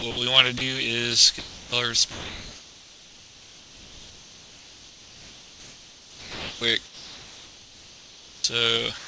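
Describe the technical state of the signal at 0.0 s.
From 0.00 to 0.27 s the sound is chopped by the voice detector, likely through its gating, with about 79 ms swapped for comfort noise. This shows as flat noise-like gaps on the spectrogram and smooth, low-level stretches in the waveform.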